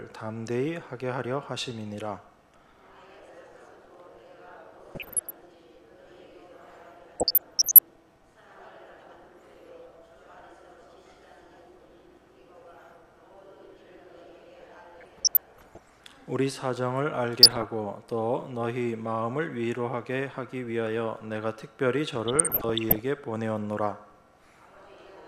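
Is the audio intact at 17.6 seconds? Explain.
No, there's DAB burbling from 17.43 to 17.69 s. Weak reception let bit errors, around one percent, slip past error correction into the MP2 data, so wrong samples put short blips of noise in individual sub-bands, giving a brief burbling over the audio.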